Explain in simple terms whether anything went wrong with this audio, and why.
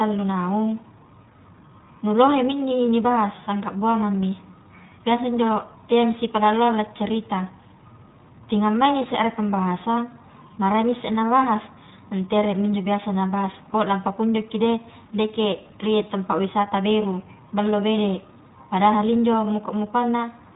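Throughout the speech, the iLBC codec leaves a rough, slightly synthetic edge from coding each 20 ms frame separately and removes everything above 3.8 kHz. A plain muffling filter would dull the sound without that roughness.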